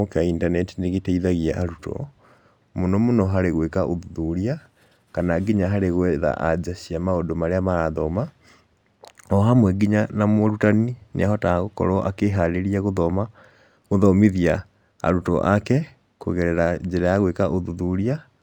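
Across the whole speech clip there is imaging from linear upsampling. The sound points to a rate doubled from 24 kHz to 48 kHz by straight-line interpolation between samples. That weak filter dulls the top of the original band and leaves faint mirror images between 12 kHz and 24 kHz, well below the signal, heard as a light metallic shimmer on sibilants. Aliasing would instead fold tones downward, but these images mirror upward above 12 kHz.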